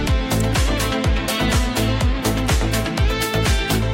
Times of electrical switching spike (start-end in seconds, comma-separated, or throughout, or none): 0.40